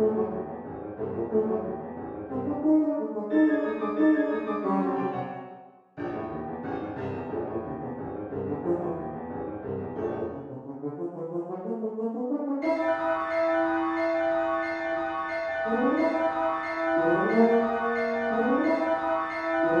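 No technical faults can be heard anywhere in the clip.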